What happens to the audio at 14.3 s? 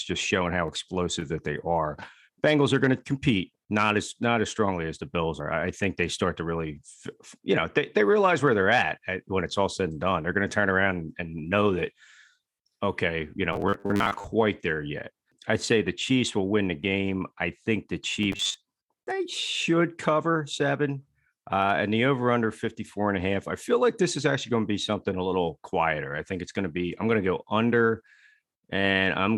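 Likely starved of new audio, playback looped a 10 ms buffer from 13.53 to 14.27 s, causing robotic sound from repeated short buffers: a rigid, metallic 100 Hz buzz.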